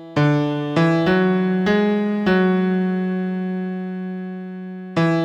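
No technical faults can be heard anywhere in the recording, and the signal plays through with no interruptions.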